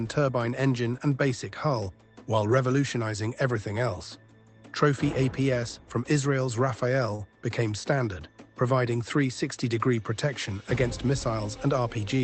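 At 7.15 to 7.22 s a packet arrived late and the jitter buffer ran dry, causing a short stall from a late packet. The receiver stretched the last sound for about 38 ms and then resumed where it left off. Nothing is lost, but that moment hangs slightly too long with a faint buzz or dip.

From 11.76 to 12.07 s the buffer held more audio than its target, so the jitter buffer sped up. It cut out pitch-period-sized slices totalling roughly 40 ms, and the sound plays about 9% faster at unchanged pitch, briefly rushed. Throughout, the call path's Opus coding adds its usual coding noise and cuts the top above 8 kHz, which fits a low bitrate around 20 kbps.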